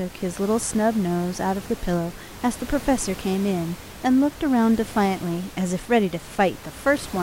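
The speech signal shows no technical faults, with the room's own background sound sitting about 17 dB beneath the speech as part of the recording.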